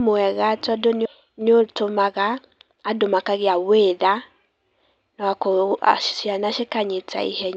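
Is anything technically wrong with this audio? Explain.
Yes, there are two faults, both early in the clip.

At 1.05 s, right after "mwega tondũ", the speech lurches forward with no gap. Roughly 0.7 s of audio is simply absent, and the sounds on either side are butted together. This is a skip ahead. A stretch of audio was thrown away, either lost in transit or discarded when the jitter buffer overflowed, while later audio was already queued. Playback jumped straight to that waiting audio instead of filling the hole.

From 1.15 s to 2.77 s, ending just before "andũ makagĩa wĩra", the talker sounds rushed, running at about 112% speed while the pitch stays put. This is a jitter buffer speed-up. The buffer had built up more audio than its target, as happens when delayed packets arrive in a burst. To drain it, the receiver repeatedly cut out short slices of one or a few pitch periods, about a fifth of a second in total.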